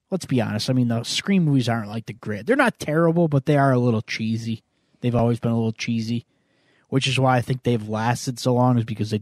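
A brief click-like stutter interrupts the speech at 2.19 s, just after "movies aren't like the", again at 5.19 s, just before "been a little cheesy", and at 8.20 s, after "why I think they've". These are overlapping chunks. The audio was handled in 3.0 s blocks, each starting slightly early, so about 6.5 ms replays at every join.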